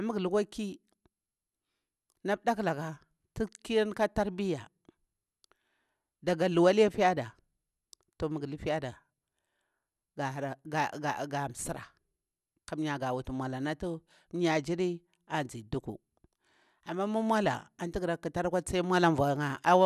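No faults detected anywhere in the speech recording.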